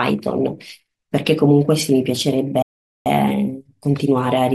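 A speech clip that cuts to silence from 2.62 to 3.06 s, a gap of about 0.44 s, before resuming: a playback stall, likely the player running short of data or its thread being blocked.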